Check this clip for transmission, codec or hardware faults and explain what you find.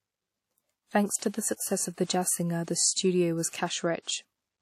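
Two codec faults are audible in this speech clip.

WMA compression runs throughout. It is the likely cause of the damage. The sound is ringing and washy, with a hiss that rises and falls with the speech. Nothing is present above 16.2 kHz. The wear fits a low bitrate, around 48 kbps.

Pre-echo occurs at 2.04 to 2.09 s, 3.49 to 3.53 s and 4.02 to 4.07 s. Each sharp onset is preceded by a short hiss lasting 54, 45 and 50 ms. The codec spreads noise across the whole block, so the quiet moment before each attack fills, and the attack sounds smeared.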